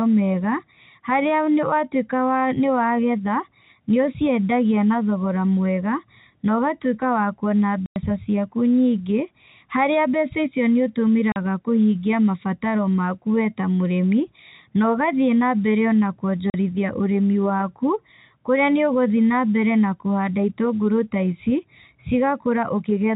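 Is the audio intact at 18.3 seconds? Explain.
Yes, the audio is intact at 18.3 seconds, with nothing at that moment beyond the normal narrowband telephone coding.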